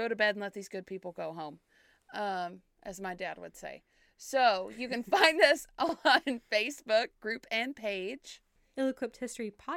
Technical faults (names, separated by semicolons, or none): overlapping chunks